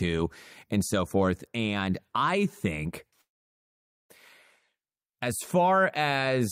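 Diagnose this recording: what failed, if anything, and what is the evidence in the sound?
Network stage: a call audio freeze, likely from delayed packets draining the jitter buffer. From 3.21 to 4.12 s the last sound is briefly carried on, then about 0.85 s of silence. The speech resumes exactly where it stopped, now 0.88 s late, with nothing lost.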